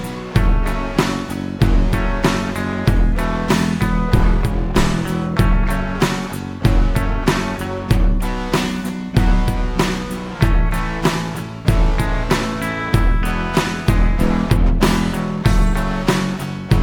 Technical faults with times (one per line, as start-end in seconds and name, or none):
none